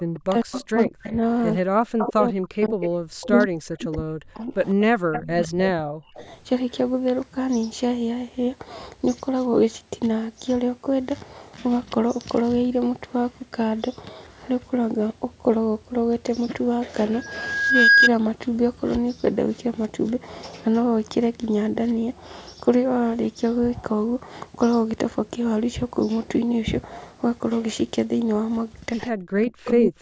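Speech, band-limited by call microphone processing to nothing above 8 kHz, with three kinds of fault. An echo leak puts a delayed copy of the speech, 156 ms behind, into 0.14–1.15 s (about 15 dB below the speech), 1.98–2.09 s (about 5 dB below), 2.64–2.88 s (about 15 dB below), 3.41–3.46 s (about 25 dB below) and 5.12–6.72 s (about 10 dB below). This is likely a far-end loudspeaker whose echo canceller let some of its microphone pickup through and sent it back. On a spectrogram the copy appears as ghost harmonics trailing the originals by the same fixed offset, and in the waveform as a low smear after each syllable. Speech suppressed in double talk appears where the speech dips by up to about 40 dB or breaks into pieces at 0.15–1.08 s (roughly 0.7 s affected), 1.62–6.26 s (roughly 4 s affected) and 29.1–29.98 s (roughly 0.7 s affected), likely because the canceller could not separate this talker from echo while both sides spoke and turned everything down. 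The waveform shows sudden notches and gaps in the envelope, and the spectrogram shows columns of harmonics vanishing or losing their upper bands. A loudspeaker feedback squeal runs from 17.13 to 18.10 s. A 1.6 kHz tone swells over roughly 0.7 s to about 10 dB above the signal as the mic-to-speaker loop gain passes one at that frequency. It shows as a single bright horizontal line on the spectrogram and a growing, sine-like envelope in the waveform.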